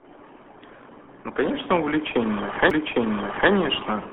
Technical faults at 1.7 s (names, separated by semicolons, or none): RealAudio 14.4 codec